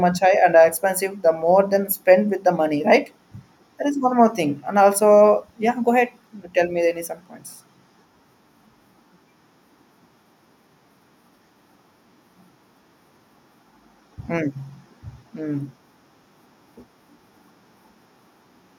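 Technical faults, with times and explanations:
No technical faults can be heard anywhere in the speech. There is nothing in the audio that calls for a time or an explanation.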